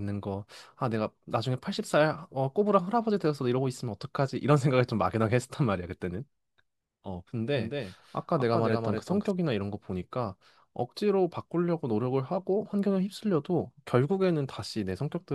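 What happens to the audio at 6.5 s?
At 6.5 s the speech carries on cleanly, with no dropout, click, distortion or other fault at that moment.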